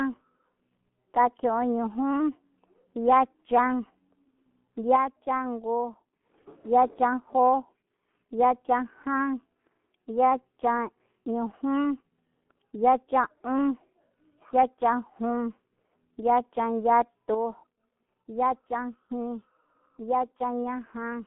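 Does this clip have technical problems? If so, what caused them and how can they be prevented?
Yes. The whole clip runs through a G.723.1 codec. The speech sounds muffled and hoarse, with nothing above about 3.8 kHz on a 150 Hz to 3.4 kHz phone band, and the heavy damage smears consonants in a way that fits roughly 6.3 kbit/s. To avoid it, record or route the call through a wideband codec at a higher bitrate.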